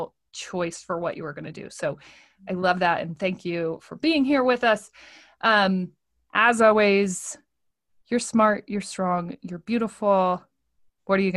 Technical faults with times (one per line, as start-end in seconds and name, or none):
0.31-8.82 clock drift buffer slips